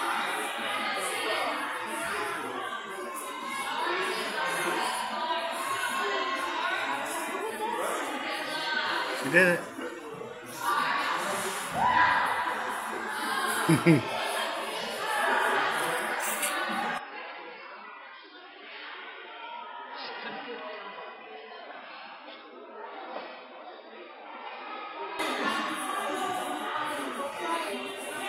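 From 16.98 s to 25.19 s the audio turns dull, losing everything above 5.3 kHz and dropping roughly 10 dB with added background noise, likely an input switched to a poorer device.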